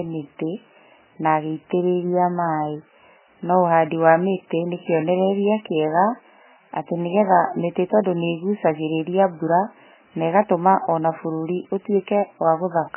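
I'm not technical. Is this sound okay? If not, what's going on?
No. The recording was likely squeezed very hard by MP3 compression, so the whole clip sounds muffled above about 3 kHz, with watery, swirly speech and smeared starts of sounds.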